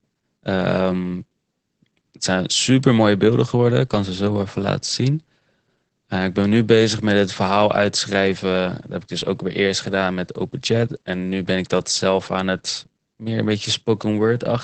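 From start to finish the speech carries Opus voice compression, and it's plainly audible. The top end stops around 8 kHz, so there's no air above that, and the SILK linear-prediction coder is handling the excitation coarsely, which is where the hoarse, slightly buzzy, faintly robotic edge on the voice comes from. That combination fits a low bitrate in the region of 12 kbps, with the codec squeezing wideband speech hard.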